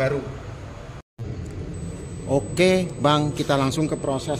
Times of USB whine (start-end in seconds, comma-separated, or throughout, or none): 1.74-4.40